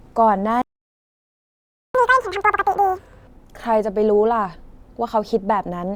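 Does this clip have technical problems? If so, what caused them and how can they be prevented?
Yes. At 0.62 s the speech cuts to silence and stays silent until 1.95 s, about 1.33 s, before resuming. This is a playback stall, likely caused by the player running out of buffered data or having its audio thread blocked. A larger playback buffer and a higher-priority audio thread would prevent it.

From 1.95 s to 3.27 s the speech runs at double speed and sounds chipmunk-like, roughly ten semitones high, before settling back to normal. This is catch-up at higher speed: the player resamples its backlog faster to recover the time lost during the stall. Using time-stretching that preserves pitch, or simply skipping ahead on live audio, would prevent the pitch jump.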